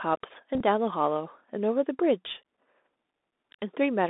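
The whole speech clip passes through the Bluetooth CVSD headset codec. The band is squeezed to roughly 250 Hz to 3.7 kHz, so there is no air above that. The codec encodes each sample as a single up-or-down bit with an adaptive step, which fits 64 kbit/s CVSD. The damage is plainly audible. Fast, loud high-frequency energy overruns the step and distorts, sibilants come out scratchy, and a granular hiss sits beneath the speech.

From 0.54 to 0.62 s the Bluetooth headset packet repeated fault appears. Voice packets between headset and phone were lost, and the receiver re-decoded the previous packet's bits in their place. About 49 ms of audio is replaced, scattered across a 67.5 ms stretch. The longest unbroken run is about 15 ms. Within those runs the 3.75 ms repeat period produces a short, steady buzz near 267 Hz before good packets resume.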